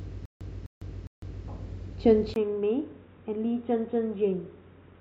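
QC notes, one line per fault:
0.00–1.48 s, stutter with silent gaps: the fault is already under way when the clip opens. A fragment of about 255 ms of speech repeats three times, each followed by roughly 153 ms of digital silence, giving an even cycle of about 408 ms. The identical bursts and dead gaps are consistent with a player or stream that likely stalled and, on each retry, replayed its last buffered fragment before running dry. The speech due in those gaps is lost.
2.34–5.00 s, input switched to a poorer device: after a silence of about 20 ms, the sound turns dull and boxy, with nothing above 3.8 kHz, and the level drops by around 5 dB. A new noise floor appears, roughly 45 dB below the speech. The narrowed band, change in tone, lower level and different background all point to the recording input likely having changed mid-take to a lower-grade microphone or a headset call profile.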